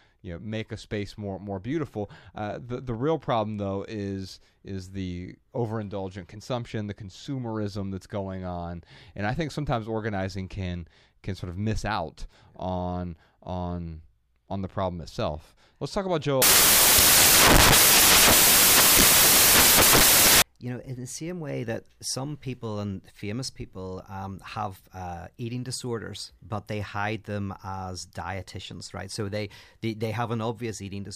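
After "talk about", from 16.42 to 20.42 s, the speech gives way to four seconds of loud hiss from samples built from the wrong bytes. The reader assembled each sample with misplaced or swapped bytes, so the rapidly fluctuating low-order bits became the dominant part of every value. On a waveform the section is a dense block; a spectrogram shows flat broadband energy across all frequencies. Normal speech resumes with "you know in the".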